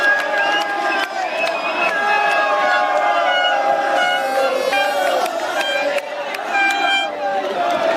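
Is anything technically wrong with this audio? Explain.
Yes. From 4.72 to 7.55 s there's a wrong sample rate fault. The audio plays about 1.09 times too fast, which fits 44.1 kHz material clocked at 48 kHz, so it sounds hurried and roughly 1.5 semitones sharp.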